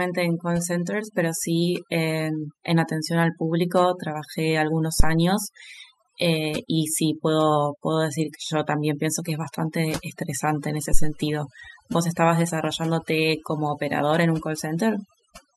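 Overdone noise removal runs through the whole speech recording. The reduction was set so aggressively that frequency bands near the noise estimate are pulled down or cut off entirely, taking quieter speech detail with them. The background drops and breaks up into twinkling specks.

A phantom power thump occurs at 5.00 s and again at 10.94 s, each lasting about 0.18 s. A supply switching on or off on a live input pushed a step through the coupling capacitors, heard as a deep thump decaying over roughly 40 ms.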